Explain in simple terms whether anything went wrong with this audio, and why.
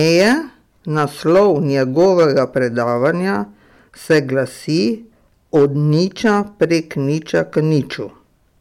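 Hard clipping runs through the whole speech clip. The signal was pushed louder than the recording chain could handle, so the loudest peaks were sliced flat. Only a small fraction of the sound is affected, but those flattened peaks add a harsh crackle on loud moments.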